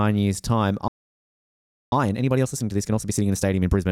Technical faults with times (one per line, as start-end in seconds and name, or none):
0.88-1.92 playback stall
1.92-3.88 time-compressed catch-up